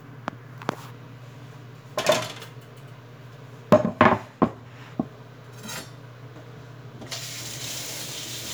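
Nothing stood out on listening to this recording of everyday sounds.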